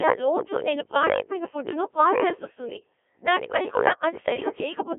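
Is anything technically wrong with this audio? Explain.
Yes. Throughout, the speech passes through a Codec 2 vocoder, sending only pitch, voicing and spectral envelope, which fits a 1.3 kbit/s mode. Resynthesised from sine waves in a 250 Hz to 3.4 kHz band, it sounds heavily robotic and buzzy.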